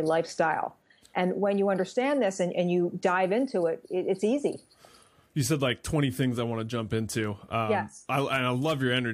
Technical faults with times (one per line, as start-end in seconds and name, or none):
none